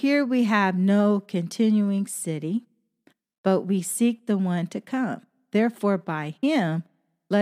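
No technical faults are audible.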